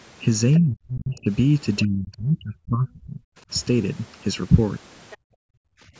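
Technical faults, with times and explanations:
Throughout: channel delay (comb filtering). One channel runs roughly 0.7 ms behind the other, and summing them to mono cancels common content at evenly spaced frequencies, the first notch near 700 Hz. The speech sounds hollow and phasey, with fixed spectral dips.
0.54 s to 0.58 s and 5.10 s to 5.17 s: other side's voice leaking through. A faint second voice, around 25 dB below the speech, appears in brief scraps. This is likely loudspeaker playback that the echo canceller left partly in the microphone signal.
0.6 s to 1.3 s and 1.83 s to 3.2 s: speech suppressed in double talk. The speech dips by up to roughly 35 dB in the first stretch and roughly 30 dB in the second, lasting about 0.7 s and 1.5 s. This is likely the echo canceller, unable to separate talker from echo, turning both down.
5.17 s to 5.91 s: background gated by the echo canceller. 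Directly after the second leak, the room sound drops by up to about 40 dB for roughly 0.7 s, then returns. The canceller clamped the microphone while the loudspeaker played and released afterwards.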